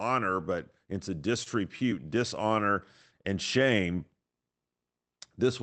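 At 1.43 to 1.49 s the speech briefly hangs: a sound is held on for about 28 ms longer than it should be, with a faint buzzy, slightly dipped quality, and then continues from exactly where it stopped with nothing missing. This is a short stall from a late packet. The jitter buffer ran dry, so the receiver stretched the last audio until the packet arrived, pushing everything after it about 28 ms later. Throughout, the call path's Opus coding leaves nothing above 8 kHz, which fits a rate around 20 kbps.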